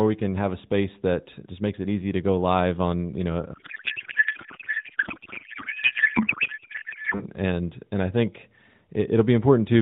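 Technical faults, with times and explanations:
3.54–7.24 s, codec payload misread: the speech gives way to garbled noise and warble that barely tracks it. The AMR frames were packed octet-aligned but decoded as bandwidth-efficient, so every field was read from the wrong bit positions until the formats matched again.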